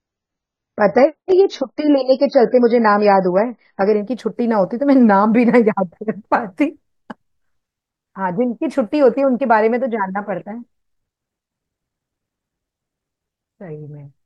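For the first 4.0 s it's an adaptive stream starting at a low bitrate. The player grabbed a lean version to start quickly, so the speech sounds dull, with nothing above 7.1 kHz and stronger codec artefacts, which fits 16 kbit/s AAC. At 4.0 s it jumps up cleanly, with no gap.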